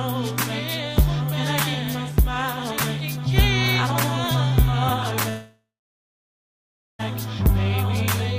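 A call audio freeze runs from 5.29 to 7.01 s: the last sound stretches into a fading buzz, then about 1.3 s of silence, before the audio resumes exactly where it stopped, now 1.7 s late. Unlike packet loss, nothing is skipped. Packets held up in transit likely emptied the jitter buffer.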